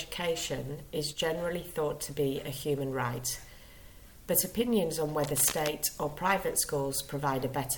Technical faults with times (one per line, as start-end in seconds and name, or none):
1.13-1.20 one channel drops out
5.23-5.71 cable scratch noise